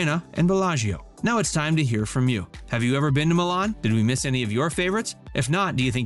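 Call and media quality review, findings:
No audible faults found: the signal holds steady level and continuity throughout, with no dropouts, distortion or timing disturbances detected on review.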